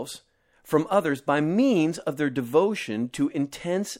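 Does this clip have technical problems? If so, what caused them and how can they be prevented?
Yes, there is a pre-echo at 3.12 s in this speech. A short hiss, about 13 dB above the surrounding floor, runs for roughly 17 ms ahead of a sharp onset and softens its attack. The codec spread the noise meant for the loud onset across a whole transform block, which fits a window of about 26 ms with no switch to short blocks. On a spectrogram it shows as a broadband smear just before the onset's vertical edge. Enabling short-block switching for transients prevents it.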